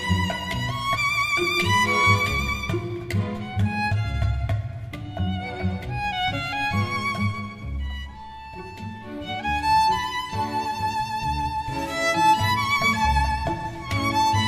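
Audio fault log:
No audible faults found.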